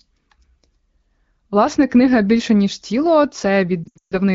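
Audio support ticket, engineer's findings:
Lost AMR speech frames, 3.83–4.18 s, after "книга більше ніж тіло": dropouts scattered over 0.28 s, longest 0.14 s run dropped to near silence within two frames; spectrogram shows held harmonics decaying to gaps. Concealment after radio checksum failures.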